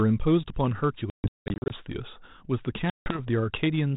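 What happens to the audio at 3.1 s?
Packet loss on an ADPCM call: from 2.9 to 3.22 s about 160 ms drops to hard silence, then speech resumes slightly distorted as the decoder's predictor resynchronises.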